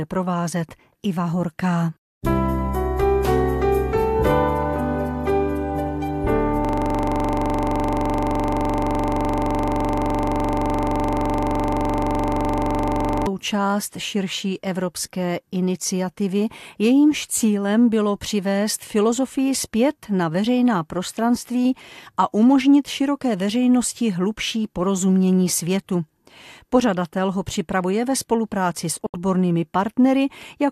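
From 6.65 s to 13.27 s the sound freezes into a system hang loop: the machine or its driver stalled while the audio hardware kept replaying the same ring buffer. One 42.67 ms slice repeats exactly, which fits a 2048-sample buffer, well over a hundred times. At 23.4 Hz the repeats fuse into a hard, rough buzz. On a spectrogram this shows as a frozen block of identical vertical stripes. The waveform shows one identical cycle tiled end to end.

At 29.06 s a digital broadcast dropout mutes the sound for 72 ms, until 29.14 s. The receiver lost the signal or rejected corrupted frames, and the gap fits about three lost frames. It then muted rather than play damaged data. A 3 ms fade makes the cut abrupt but clickless, and the material sent during the gap does not return. The waveform shows a short flat-line hole, and a spectrogram shows a clean, blank vertical gap.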